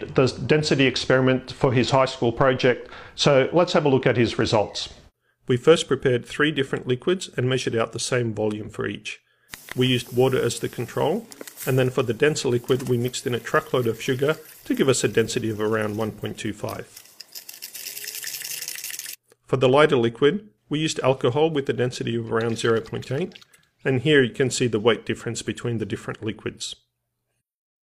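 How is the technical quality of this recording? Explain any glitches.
The technical quality of this recording is sound, with no glitches to explain.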